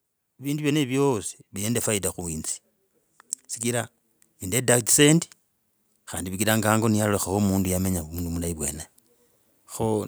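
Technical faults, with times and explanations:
0.41–2.48 s and 5.93–8.64 s: automatic gain rising. Voice and background swell together, by about 4 dB then about 6 dB, as gain control lifts quiet input.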